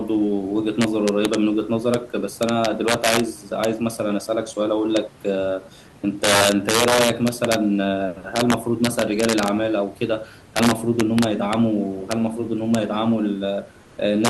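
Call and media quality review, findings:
Integer overflow, throughout: harsh, violent cracks on the loudest speech peaks, much sharper than clipping. Gain stage or mix sum driven about 5 dB past full scale with no saturation. Peaks wrap to the opposite sign and jump across the whole range. A small fraction of samples affected, but every loud syllable can crack.

Comfort noise in place of the background, 13.81–13.97 s (160 ms): the room noise, about 28 dB below the speech, is briefly replaced by a flat, featureless hiss, about 1 dB quieter. Likely Opus DTX on the sending side treats the pause as silence. The receiver then fills the gap with synthetic noise roughly matched to a background about 31 dB below the loud parts.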